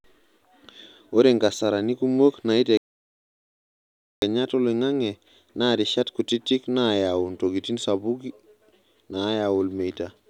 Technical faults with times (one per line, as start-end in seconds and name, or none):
2.77-4.22 audio dropout to silence